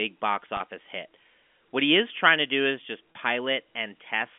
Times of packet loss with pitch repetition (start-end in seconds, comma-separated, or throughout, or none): 0.57-0.60, 3.13-3.15